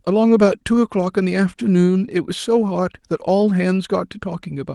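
No technical faults can be heard in this speech.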